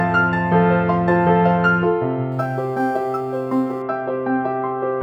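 It's a music clip, and from 2.32 to 3.82 s there's crude rate conversion: a gritty, inharmonic fizz roughly 35 dB under the music, from samples simply being dropped with no filtering, which fits a sloppy 48 kHz to 44.1 kHz step.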